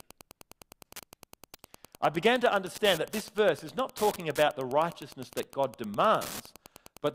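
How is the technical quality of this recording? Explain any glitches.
The recording is marred by two faults, one running through the whole clip and one brief glitch.

A steady ticking runs under the speech about ten times a second, roughly 20 dB below it. This is Wi-Fi interference: a nearby radio's beacon, repeating every 102.4 ms, is being picked up and rectified by the audio circuitry, so each transmission lands as a click.

At 4.48 s, between "verse is not talking" and "the righteousness that", there is a short glitch peaking around -30 dBFS. This is a corrupt frame decoded: damaged bits in the compressed stream were played anyway, placing energy at wrong frequencies for a span that suggests a few frames were hit.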